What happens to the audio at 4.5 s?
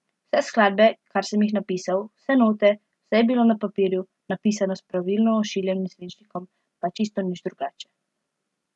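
Nothing goes wrong at 4.5 s: the speech continues cleanly through that point, with no dropout, click, distortion or other fault.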